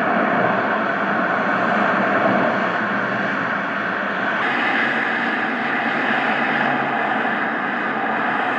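From 4.42 s to the end, the sound runs as a section at the wrong speed, about 1.12 times too fast, so pitch and tempo rise together by about two semitones. Everything after that point sounds higher and more hurried. The likely cause is playback or editing against a mismatched clock. On a spectrogram, every frequency band jumps upward by roughly 12 percent at 4.42 s, and on the waveform, events afterwards are packed closer together in time.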